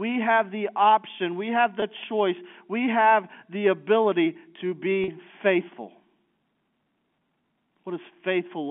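Packet loss with pitch repetition hits this speech at 1.80 to 1.82 s and again at 5.04 to 5.08 s. The receiver bridged each gap by repeating the last pitch period, giving a briefly held, buzzy tone over about 20 ms and then about 40 ms, consistent with one and then two lost packets. The call runs through G.711 telephone coding, which confines the sound to roughly 150 Hz to 3.4 kHz.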